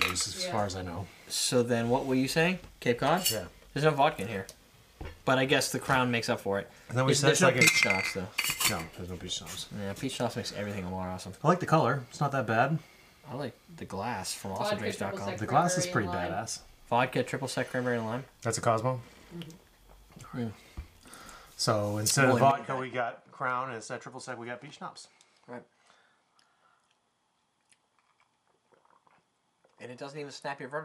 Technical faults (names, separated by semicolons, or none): input switched to a poorer device